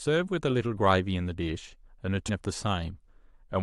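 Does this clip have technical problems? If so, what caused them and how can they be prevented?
Yes. At 2.28 s the speech jumps abruptly forward with a brief smeared blip. Compressed frames were skipped: around fifteen 23.2 ms frames, roughly 400 ms of audio, were missing or rejected as damaged by the decoder. Preventing this means verifying file integrity after copying or transfer and using error-protected storage or streaming so corrupted frames can be recovered.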